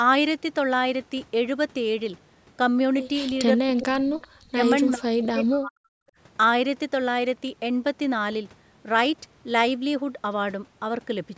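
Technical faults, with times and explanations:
3.56–4.17 s, 4.46–4.59 s, 4.93–5.93 s: speech suppressed in double talk, the voice drops by roughly 35 to 40 dB in pieces, likely because the echo canceller muted both overlapping talkers.
3.8 s and 4.2–4.27 s: echo leak, faint scraps about 25 to 30 dB below the voice, delayed 386 ms, likely loudspeaker echo slipping past the far end's canceller.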